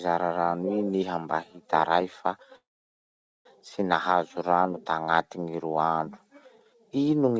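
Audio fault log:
2.56–3.47 s, call audio freeze: a short fading continuation of the last sound dies into about 0.84 s of silence, then the audio resumes where it stopped, likely because delayed packets emptied the jitter buffer. The waveform shows a flat gap, and the spectrogram shows a blank band across the band-limited range below 8 kHz.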